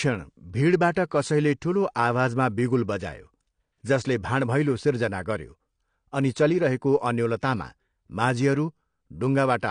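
From start to finish the speech carries AAC compression damage, likely from AAC-LC at a low rate consistent with about 32 kbps. Nothing survives above 9.8 kHz, so the top end sounds dull, and sibilants and sustained sounds take on a warbling, fizzy smear.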